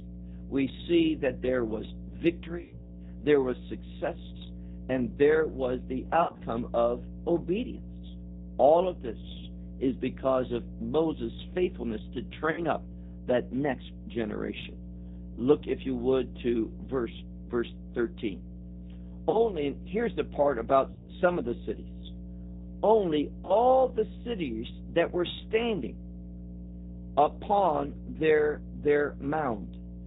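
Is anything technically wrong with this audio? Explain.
Yes, three problems. There's a mains hum at 60 Hz running through the whole clip, probably from a ground loop or a nearby transformer leaking the power line into the signal. It's strong, sitting only a few dB under the speech as a steady low drone.

The speech has also been through the G.729 codec, and the damage is plainly audible. Everything above 4 kHz is gone, and the voice sounds rough and a bit synthetic because it's rebuilt from a filter, pitch predictor and sparse pulses. All of that fits the 8 kbit/s G.729A variant.

Finally there's VoIP packet loss concealed by the speech codec at 2.61, 6.23, 12.51, 19.30, 20.92 and 23.45 s. The decoder extrapolates its last frame, so the sound smears into a fading buzzy tone or coloured noise and stays weak briefly afterwards. Examples are just before "there was success and", the gap between "and there was the" and "of obedience", and just before "the cities that were".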